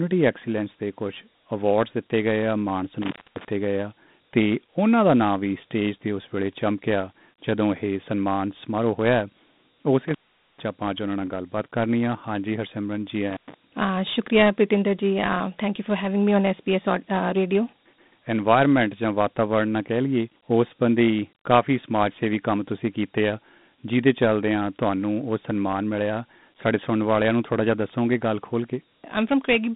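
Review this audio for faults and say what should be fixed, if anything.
Dialogic VOX ADPCM runs throughout. The coarse 4-bit steps leave gritty hiss trailing the speech. A spectrogram shows a 150 Hz to 3.7 kHz band, empty above 3.8 kHz, which fits 32 kbps. To prevent it, record and archive in linear PCM at a higher sample rate.

Intermittent contact opens the line at 3.02–3.45 s (open 254 ms), 10.08–10.64 s (439 ms) and 13.30–13.54 s (112 ms). Each gap shows as a flat, near-silent stretch in the waveform with crackle spikes at the edges. To prevent it, reseat or replace the loose cable or plug.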